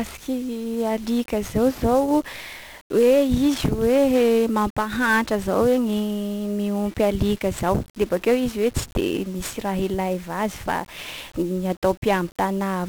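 Throughout the speech, 1-bit DFPWM compression reduces each sample to one up-or-down step, causing heavy broadband quantisation noise: everything sounds fuzzy and crackly, with treble buried in hiss.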